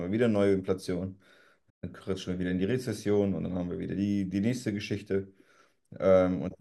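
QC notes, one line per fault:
1.69–1.84 s, playback stall: the player likely ran short of buffered data or had its output thread held up, so nothing reached the output until it caught up. The speech cuts off in mid-flow and leaves a 127 ms hole of dead silence, long enough to register as a hiccup rather than a click. The sound then resumes.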